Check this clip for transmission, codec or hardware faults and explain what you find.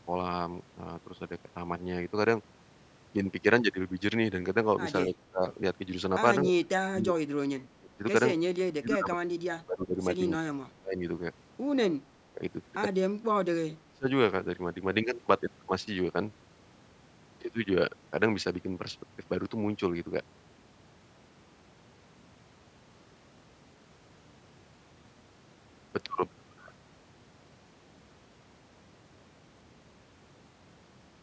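The speech has one recurring fault, in seven places.

Speech suppressed in double talk occurs at 5.06–5.42, 6.43–8.04, 8.79–10.0, 10.38–11.01, 12.08–12.41, 13.23–13.29 and 13.86–14.09 s. The likely cause is an echo canceller that mistook overlapping far-end audio for echo and turned the talker down. The voice dips by about 20 to 30 dB, or drops out in fragments.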